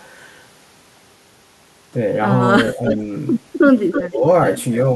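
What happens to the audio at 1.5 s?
At 1.5 s the speech continues intact, with no dropout, click, distortion or other fault at that point.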